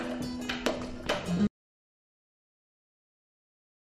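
At 1.47 s the sound stops abruptly and never returns. From there to the end of the clip there is silence, with no room tone, hiss or background left, so the cut is heard as a sudden drop into nothing rather than a fade. This is an audio dropout to silence. The likely cause is a lost input, such as a disconnected device, a failed link or an accidental mute, while the recorder kept writing silence. Whatever followed that point is not captured.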